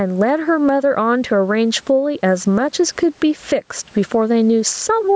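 Gain pumping throughout: the gain swings roughly 15 dB, squashing loud and soft parts closer in level, likely from excessive microphone gain driving a fast limiter.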